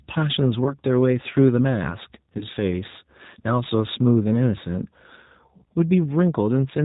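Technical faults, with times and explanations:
throughout: G.729 codec. The whole clip has that narrowband, slightly rough and synthetic quality, with plainly audible codec damage and nothing above 4 kHz. That fits an 8 kbit/s G.729 stream. The codec doesn't send the waveform itself. It sends a vocal tract filter, a pitch predictor and a handful of pulses per 10 ms frame, and the decoder rebuilds speech from those. That approximation is what gives the voice its coarse, synthetic edge.
0.64–0.75 s and 2.39–2.45 s: VoIP packet loss concealed by the speech codec. Each of these is a dropout of about 20 ms, which fits a single lost packet. Instead of silence, the decoder carried on from its last pitch and filter settings and let the level sag, so you get a brief smeared stretch. Because each frame builds on the one before, the damage lingers a little past the actual gap.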